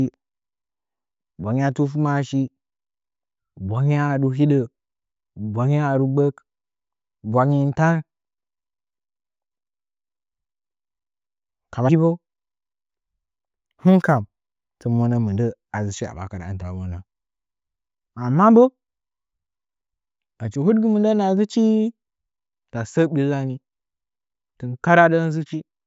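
From 13.51 to 15.01 s there's imaging from linear upsampling. The rate was raised by joining samples with straight lines, a weak interpolation filter, and the spacing points to a 16 kHz source taken up to 48 kHz. The top of the speech band goes dull, and a mirrored copy of the spectrum sits between 8 and 16 kHz, very faint and well down from the speech. You hear it as a thin metallic shimmer on sibilants.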